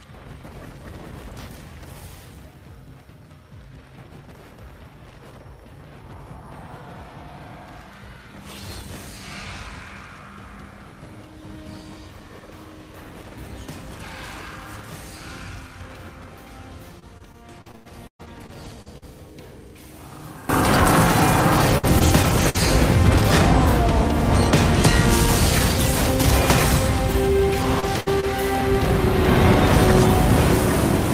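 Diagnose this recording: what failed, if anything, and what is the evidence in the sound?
One channel inverted, 0 to 20.49 s, likely from a polarity-swapped lead in the analogue wiring: summed to mono, common sound cancels, dropping about 19 dB to a faint residue.

Repeated packet loss (robotic sound) at the network stage, 16.99 to 19.04 s, 21.20 to 22.56 s and 27.12 to 28.33 s: gaps up to 119 ms are patched by extending the last sound, giving choppy audio with pieces missing.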